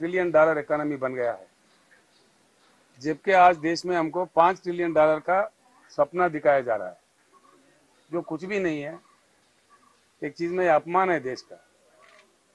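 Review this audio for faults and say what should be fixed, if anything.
No faults; nothing to fix.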